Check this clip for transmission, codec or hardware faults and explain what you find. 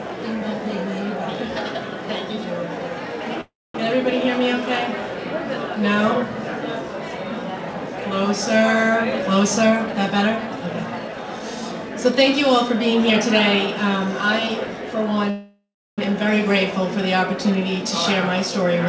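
Three faults are present: two call audio freezes and one stretch of jitter buffer speed-up. The audio has no content above 8 kHz, which fits a wideband call codec such as G.722 at 64 kbps.

Call audio freeze, 3.41 to 3.75 s and 15.30 to 15.99 s: packets were likely held up in transit, so the jitter buffer ran dry. The receiver kept extending the last sound for 334 ms in the first case and 674 ms in the second. That extension is heard as a fading buzz or hiss that drops into silence for about 240 ms and then about 320 ms. When the packets arrive, the sound resumes exactly where it stopped, so nothing is lost. The rest of the clip is simply pushed later.

Jitter buffer speed-up, 8.88 to 11.48 s: the buffer was holding more than its target. To work off the backlog, the receiver repeatedly removed short pitch-period-sized pieces, about 0.3 s in total. The pitch stays the same, but this stretch plays at about 112% speed and sounds noticeably rushed.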